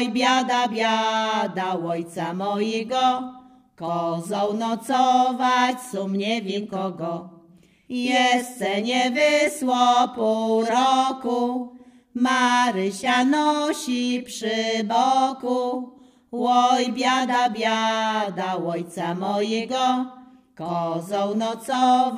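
Nothing goes wrong anywhere in this recording, so there's no fault to point to at any moment.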